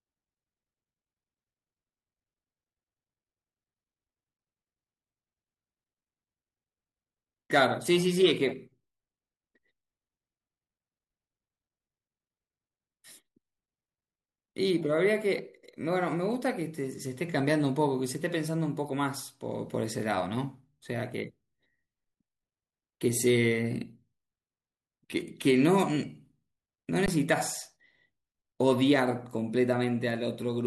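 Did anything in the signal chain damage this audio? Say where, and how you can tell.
Yes: an underrun with held sample at the output buffer, at 4.37 s and from 27.06 to 27.08 s. The converter held its last value, so the speech halts on a flat level, then resumes after roughly 15 to 20 ms of live audio went missing.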